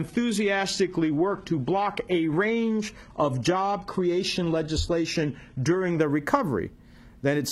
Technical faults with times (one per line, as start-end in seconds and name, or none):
0.00-6.00 adaptive stream starting at a low bitrate